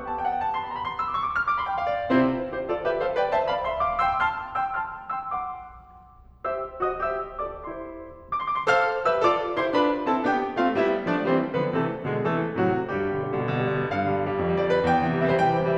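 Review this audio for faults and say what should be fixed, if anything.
Nothing in this music recording needs fixing, as no faults can be heard anywhere in it.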